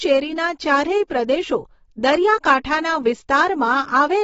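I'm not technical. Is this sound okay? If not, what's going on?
No. Likely heavy AAC compression throughout: squeezing the speech into little data throws away everything above 7.6 kHz, leaving it dull, smeared and fizzy.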